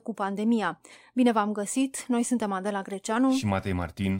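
No technical faults occur at any point in the speech, so there is nothing to describe in time order.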